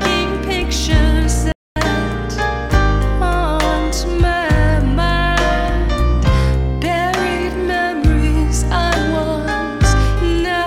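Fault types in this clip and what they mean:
Playback stall: the sound halts abruptly at 1.52 s and stays silent for about 240 ms before carrying on at 1.76 s. That fits a player that likely ran short of data or had its thread blocked. Waveform and spectrogram show a clean flat gap with sharp edges.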